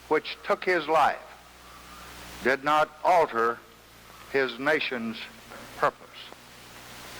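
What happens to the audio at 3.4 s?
At 3.4 s you're inside a drift correction step that runs from about 3.33 to 4.33 s. For that one second everything plays 5.8% slow and drops about a semitone (roughly 103 cents), speed and pitch shifting down together in one sudden step. The likely culprit is clock-matching software nudging the playback rate in a single jump to rebalance its buffer, rather than easing it gradually.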